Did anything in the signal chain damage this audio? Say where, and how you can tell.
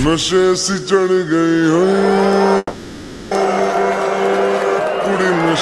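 Yes. Call audio freeze, 2.57 to 3.33 s, at the network and jitter-buffer stage: the sound stalls into a fading, buzzy continuation for about 740 ms, with a brief silence of about 20 ms, then resumes where it left off. Packets were likely delayed, starving the buffer.

Skip ahead, 3.71 to 3.74 s, also at the network or jitter buffer: the audio jumps forward with only a tiny seam of about 10 ms, losing roughly a third of a second. Audio was dropped, in transit or by the buffer, shedding about 300 ms of the delay built up during the freeze.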